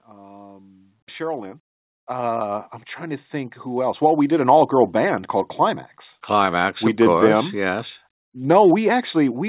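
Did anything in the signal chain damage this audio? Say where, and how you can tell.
Yes. Automatic gain rising in the call processing: from 0.06 to 4.77 s, just before "band called", speech and background swell together by about 17 dB as the gain control ramps up.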